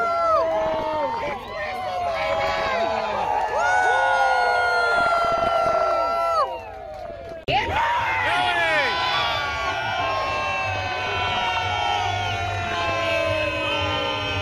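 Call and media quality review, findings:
DAB burbling at 0.62–1.33 s, 2.23–2.72 s, 4.92–5.91 s, 7.04–7.81 s, 10.74–11.57 s, and 12.45–12.90 s. Short blips of noise over the programme. Weak reception leaves bit errors of roughly 0.7 to 1 percent past error correction, corrupting MP2 samples and scale factors so single sub-bands jump in level.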